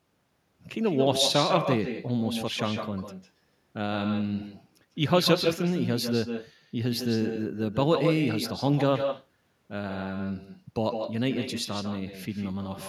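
From start to finish there's echo with no canceller: your own speech returns about 6 dB down, roughly 150 ms behind, because the far end's loudspeaker feeds its microphone and nothing strips it out. Every phrase gets a thinner shadow trailing just behind it.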